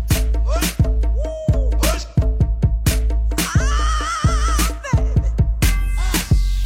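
No technical faults are audible.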